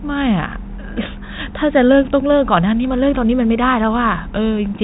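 No technical faults can be heard in the speech. It comes through G.711 telephone coding, so the sound is narrowband, with nothing above about 3.8 kHz.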